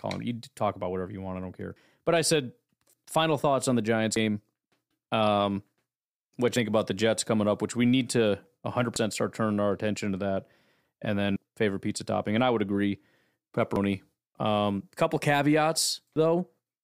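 Speech with audio missing between chunks: skips at 1.76, 4.16, 6.56, 8.96 (between "which we need to" and "start turning our attention"), 11.36, 13.76 and 16.16 s, each dropping about a tenth of a second. The even spacing likely comes from 2.5-second chunk boundaries. On the waveform and spectrogram, each skip appears as an abrupt seam with no gap.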